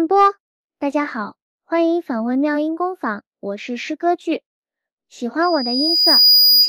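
The audio develops loudspeaker feedback squeal from 5.42 s to the end. A microphone is picking up the loudspeaker it feeds. At 4.9 kHz the loop gain passes one, so that frequency reinforces itself on every pass. It grows over about a second into a piercing single tone. By the end it sits roughly 10 dB above the rest of the sound. Nobody breaks the loop before the clip stops.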